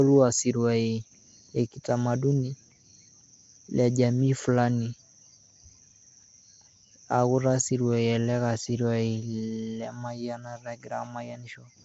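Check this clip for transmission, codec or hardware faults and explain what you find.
One codec fault runs through the whole speech clip. Throughout, Nellymoser compression is likely: coarse fixed-rate block coding, consistent with 32 kbps, fills weak bands with noise and cuts everything above 7.7 kHz, leaving speech rough, hissy and smeared underwater.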